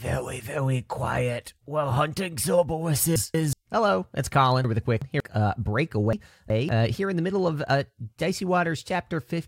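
Speech with chunks out of order at 3.16–3.53 s, 4.64–5.20 s and 6.13–6.69 s: roughly 186 ms blocks play one or two slots late, giving jumbled joins.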